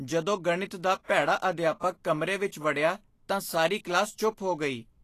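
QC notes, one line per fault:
Throughout, Vorbis compression: the speech has a grainy, hissy top end, with consonant attacks smeared and the upper harmonics sounding roughened. Nothing is present above 14.2 kHz. The likely cause is a low-quality Vorbis encode, plainly audible here, which fits a bitrate around 37 kbps. At that setting the encoder keeps only a smooth outline of the treble and quantises the detail on top so coarsely that it turns into noise of similar energy.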